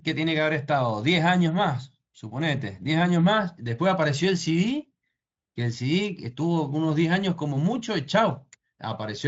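The speech carries no audible technical faults; it passes through what sounds like Speex at a high quality setting, where the coding leaves at most a faint trace on the sound.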